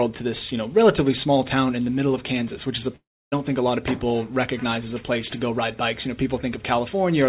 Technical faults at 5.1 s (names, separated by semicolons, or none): none